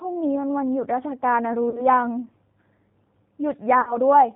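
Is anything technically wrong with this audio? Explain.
Yes. Two problems are audible.

The G.729 codec damage runs through the whole speech clip. It is coded at 8 kbit/s. The decoder rebuilds each 10 ms frame from a vocal tract filter, a pitch predictor and a few pulses. Nothing above 4 kHz survives, so the sound is band-limited and dull. The voice is intelligible. But it is plainly rough and synthetic.

VoIP packet loss concealed by the speech codec occurs twice. The first runs from 1.70 to 1.86 s, after about 40 ms of missing audio. The second runs from 3.81 to 3.97 s, after about 60 ms went missing. That fits two and three lost packets. The decoder extends its last pitch and filter, dropping the gain frame by frame. Each gap turns into a stretched, buzzy tone or coloured noise that fades. The voice stays weak or distorted after packets resume.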